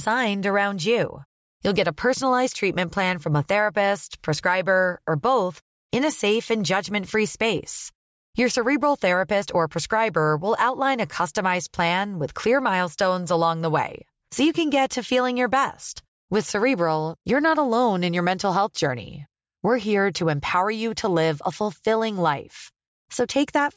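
Listening to the speech recording, nothing stood out as a technical problem at any point.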